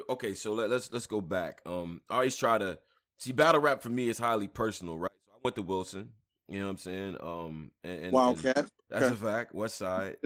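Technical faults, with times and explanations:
5.08 to 5.45 s, audio dropout to a faint residue: after "me is highly personal" the speech cuts out abruptly for 0.37 s. Only a faint sound about 30 dB down remains, likely from a brief signal loss with the path still live.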